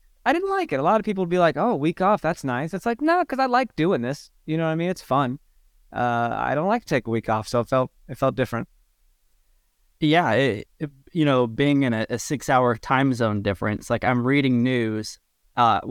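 No technical faults are audible.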